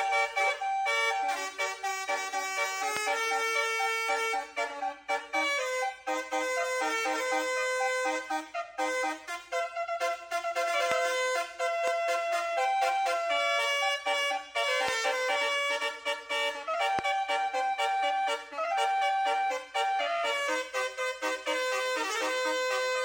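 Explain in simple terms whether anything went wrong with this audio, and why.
Five loud pops interrupt the audio, at 2.97, 10.92, 11.88, 14.88 and 16.99 seconds. Each is a single sharp hit lasting about two hundredths of a second and standing well above the surrounding sound. The likely cause is a sudden electrical jolt, such as static, a loose plug or a switch, added to the signal. Unlike a dropout or glitch, nothing is lost: the audio carries on unbroken underneath each pop.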